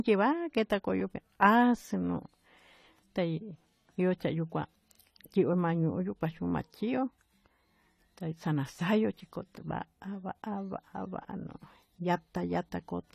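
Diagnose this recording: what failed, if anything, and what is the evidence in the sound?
The codec stage is at fault: the speech most likely went through AAC compression at a low bitrate, which fits roughly 32 kbps. Throughout, nothing remains above 14.1 kHz, and the coarse quantisation leaves the sound dull and smeared, with fizzy, warbling sibilants.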